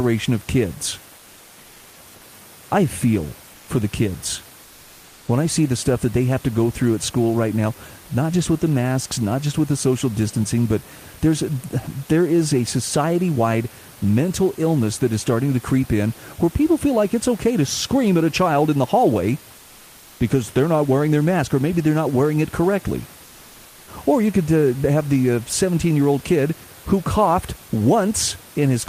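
From 19.57 to 20.19 s, after "child in the hallway", the sender likely stopped transmitting, so comfort noise replaces the room background: a featureless hiss about 1 dB quieter.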